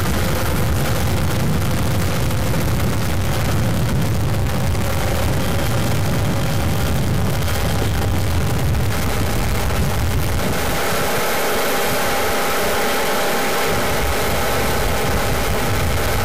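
A stuck bit runs through the whole clip, from start to finish. One bit of each sample is likely held at a fixed value by a faulty line or converter, so about half the samples jump by that bit's weight. This distorts the sound, and pauses fill with noise.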